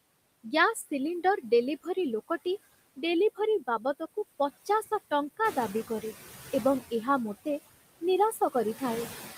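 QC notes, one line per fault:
Throughout: noise suppressor artifacts. Background noise is pulled down by about 16 dB between phrases and swells back under speech.
5.44 to 5.92 s: noise suppressor catching up. Room noise jumps by about 11 dB near 5.5 s. The suppressor's estimate lags 480 ms, so noise leaks through before sinking.
8.32 to 8.55 s: speech cut by the noise suppressor. The suppressor mistakes part of the speech for noise and dips it by up to about 11 dB for roughly a tenth of a second, so sounds are swallowed rather than the background changing.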